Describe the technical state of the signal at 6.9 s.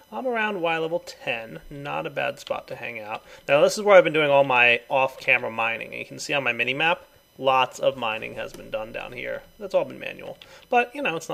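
USB whine is present at 6.9 s and runs through the whole clip: current drawn in 1 ms USB frames leaks into the audio via power or ground, producing a fixed-pitch whine at 1 kHz with harmonics peaking near 20 kHz, roughly 35 dB below the signal.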